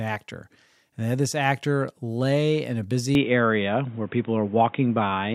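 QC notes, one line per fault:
3.15–5.35 s, input switched to a poorer device: from 3.15 s to the end, the speech turns abruptly narrow and boxy, with nothing above 3.8 kHz, a level shift of around 5 dB and a new background noise roughly 30 dB under the speech. There is no gap at the change. The likely cause is the recording input moving to a lower-bandwidth microphone or a headset call profile. On a spectrogram the upper band goes empty at one sharp line. The waveform's envelope steps in height there.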